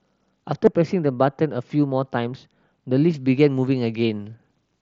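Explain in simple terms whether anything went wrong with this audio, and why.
Two things went wrong in this speech recording.

From 0.53 to 3.14 s, the sound turns dull and muffled, as if heard through a blanket. This is de-emphasis applied wrongly: a treble cut meant to undo an earlier treble boost was applied when no boost was there, so the high end tilts steadily downward. A faulty microphone or a lost connection cuts sound unevenly or in bursts. This is a smooth, even dimming of the crisp upper sounds, starting and stopping cleanly.

At 0.66 s there is a tiny gap, about 15 milliseconds long, which points to a couple of packets dropped between the headset and the phone. This is concealed Bluetooth headset packet loss: the phone fills the hole by repeating a matching slice of the sound just before it, so it is nearly hidden. A real dropout would leave silence or a click. Here the patch is so brief that at most a faint blip is heard, not the buzzy held tone that a longer run of losses would cause. 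The headset link itself, using the mSBC wideband codec, adds only a light graininess of its own.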